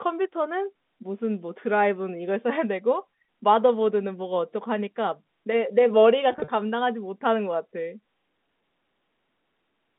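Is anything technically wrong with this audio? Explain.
Yes. Between 6.32 and 6.48 s the sound turns briefly buzzy and held. This is packet loss with pitch repetition. About 100 ms of audio went missing in short gaps across 160 ms, the longest 40 ms, and the receiver filled each gap by repeating the last pitch period.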